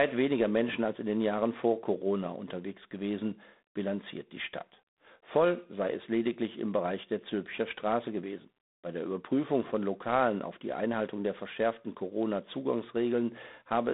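G.726 ADPCM coding runs from start to finish. Each sample is sent only as a few bits describing its difference from an adaptive prediction, and the plainly audible coarseness of that difference points to the 24 kbit/s rate, about three bits a sample. The speech carries a harsh, rasping hiss that swells and fades with its level. The telephone band spans roughly 200 Hz to 3.7 kHz, and nothing passes above 3.8 kHz.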